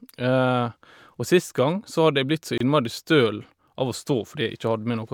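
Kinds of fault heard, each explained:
Gap at a join of encoded pieces: leftover encoder padding where separately encoded sections meet. The speech briefly drops out for 26 ms, just before "innmari støl av".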